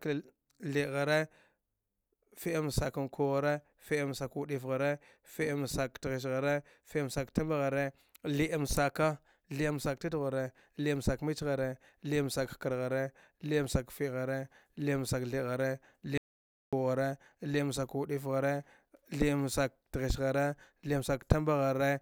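At 16.18 s the speech cuts off into dead silence, with no room tone at all, and resumes at 16.73 s, so about 0.55 s of audio is simply missing. This is an audio dropout to silence, likely from the input being briefly lost while the recorder kept writing silence.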